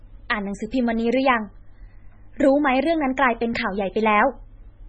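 MP3 compression runs throughout the speech: nothing sounds above about 8.3 kHz, and the heavy watery, swirling smear fits a very low bitrate near 16 kbps. The likely cause is an encoder starved of bits, which cut the treble and let weak frequency lines flicker between frames.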